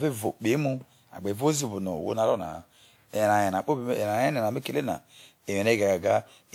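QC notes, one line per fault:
Throughout, generation loss: the speech sounds swirly, smeared and hollow, with blurred onsets, worse than a single WMA encode near 96 kbit/s would give. The likely cause is about five passes, each re-quantising on a shifted frame grid, so noise and spectral holes pile up.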